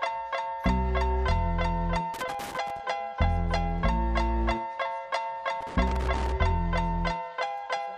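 At 2.14 s a burst of loose connector crackle breaks in and runs to 2.80 s. It comes back from 5.61 s to 6.32 s. Each burst is an irregular, scratchy rattle lasting under a second. A worn or dirty contact is making and breaking as it shifts. That chops the audio on and off in rapid, uneven bursts, and any DC on the line adds pops at each break.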